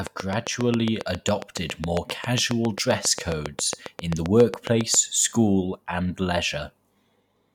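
A speech recording carrying a train of clicks from 0.07 s to 4.95 s, ending just before "school and". The pulses arrive at a regular 7.4 per second, roughly forty in all, each with much the same sharp shape and peaking at about 15 dB above the speech, so they tick through both the talking and the pauses. The steady repetition points to likely electrical interference from nearby equipment or a faulty connection or power supply.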